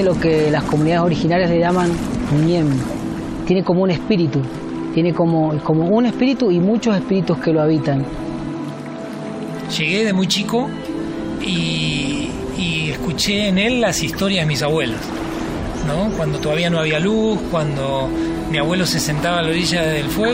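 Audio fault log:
No fault is heard anywhere in the clip.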